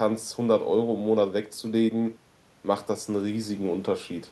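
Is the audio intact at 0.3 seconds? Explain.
Yes, the speech at 0.3 s plays through cleanly, with no dropout, click, distortion or other fault at that moment.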